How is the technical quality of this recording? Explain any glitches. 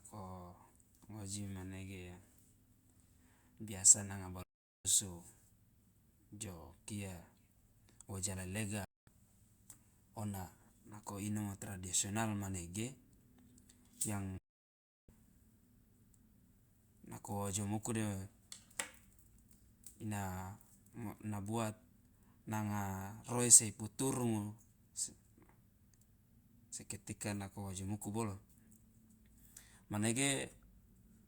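The speech drops out three times, in digital broadcast dropouts. The first runs from 4.43 to 4.85 s, about 0.42 s. The second runs from 8.84 to 9.08 s, about 0.23 s. The longest runs from 14.38 to 15.09 s, about 0.71 s. Each time the receiver stopped getting usable frames and muted until good ones came back. The sound fades to silence within about 3 ms, then resumes further on. Whatever was broadcast in those gaps is gone.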